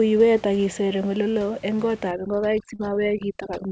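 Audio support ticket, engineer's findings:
Overdone noise removal from 2.11 s to the end, just after "iseer eng oleloo eng": suppressor set too aggressive, gating individual bands near its noise estimate to nothing along with quiet speech detail. Room noise, about 23 dB under speech, drops and breaks up into twinkling specks.

Short stall from a late packet, 2.76–2.81 s: packet late on the G.722 call path, jitter buffer ran dry, receiver stretched the last sound about 30 ms, then resumed where it stopped, adding about 30 ms delay. Nothing lost, but the sound is briefly held, with slight buzz or dip.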